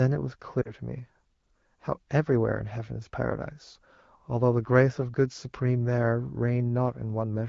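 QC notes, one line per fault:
0.62–0.73 s, lost AMR speech frames: about 40 ms of speech, which fits two consecutive 20 ms frames, failed the checksum after radio errors, so the AMR-WB decoder filled the gap by repeating the last good pitch and vocal tract settings at falling gain. The sound smears and drops sharply, as the wideband decoder fades quickly. When good frames resume, the voice returns briefly weak or rough before it is back to the clear 12.65 kbit/s HD Voice quality.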